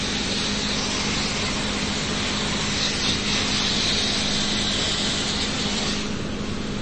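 Across the whole clip the sound is dull and watery, with nothing above about 8.3 kHz, a swirly texture as faint detail flickers in and out, and smeared attacks. The likely cause is heavy MP3 compression, the plainly audible damage pointing to a bitrate near 32 kbps.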